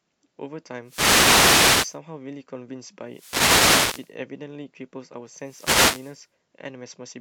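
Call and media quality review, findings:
Wireless microphone noise hits at 0.82–2.00 s, 3.06–4.16 s and 5.33–6.26 s. Analogue FM radio link fading as reflections cancel, so receiver noise rises and masks the speech with static swishes. Spectrogram: broadband noise wash filling the band; waveform: raised noise floor across each span.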